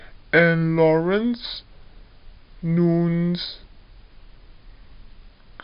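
From start to finish the speech runs slow and sits low, the mark of a wrong sample rate: the samples are being played back more slowly than they were captured, with no conversion, as if 48 kHz material were clocked out at 32 kHz. Everything runs at two thirds of normal speed and drops about 7 semitones. Because tempo and pitch fall together by the same ratio, this is not a pitch shift or a time stretch, each of which would change only one.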